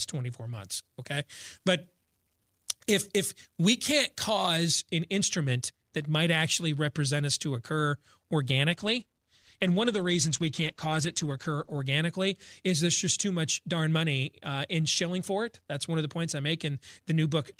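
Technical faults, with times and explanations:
0.54–4.57 s, pre-emphasis left on: treble sits about 8 dB high at 10 kHz, fitting an uncorrected CD 50/15 µs curve, so speech turns thin and hissy, not merely bright-EQ'd.
8.72–11.91 s, call bitrate drop: speech turns rough and muffled for about 3.1 s, consistent with a fall from 32 to 13 kbps, without the dropouts that mark packet loss.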